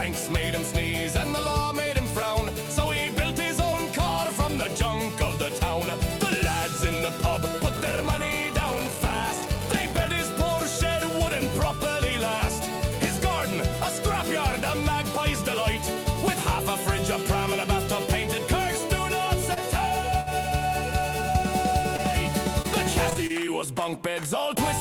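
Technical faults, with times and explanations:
7.75–10.12 s: block size mismatch (padded). One stage writes shorter blocks than the next reads, and each block's shortfall is filled with zeros. The silent slivers repeat at 46.9 Hz, giving a low buzz, which fits 1024-sample blocks. The sound runs at 0.861 times normal speed, with timbre unchanged.
19.54–19.58 s, 21.32–21.36 s, 21.96–22.00 s, 22.62–22.66 s, 23.10–23.13 s, 23.13–23.17 s, 23.27–23.31 s: short concealed packet loss. Each time about 20 ms of audio arrived too late. The receiver extended the preceding sound for 12 to 25 ms, then blended back. Each event is a brief smear or wobble.
20.20–20.28 s: burst of packet loss. About 60 ms of audio never arrived in time. The receiver kept the last sound going for about 60 ms, fading it as the gap went on. It is heard as a short held buzz or fading hiss, and the audio then resumes with that stretch missing.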